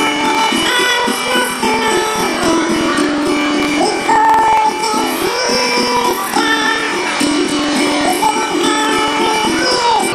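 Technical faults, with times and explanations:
Throughout, planar audio read as interleaved: each stretch of about 46 ms, which fits a 2048-sample block, holds one channel's samples followed by the other's, but playback takes them as alternating left-right pairs. Each block's left half and then its right half are squeezed into half the time, so the sound plays an octave high. It keeps its overall pace and flutters at about 21.5 Hz where the halves join.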